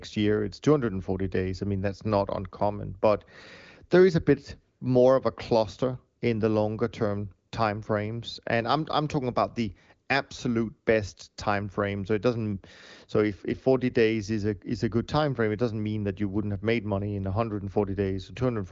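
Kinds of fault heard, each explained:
Nothing stood out on listening to this speech, which comes over an AMR wideband (HD Voice) link at 23.05 kbit/s, with the band ending near 7.6 kHz.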